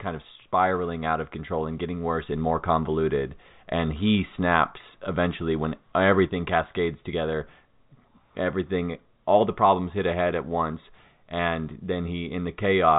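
Nothing's gone wrong here; it's just ordinary G.711 telephone coding doing its job, so the speech tops out at about 3.8 kHz the way any regular phone line does.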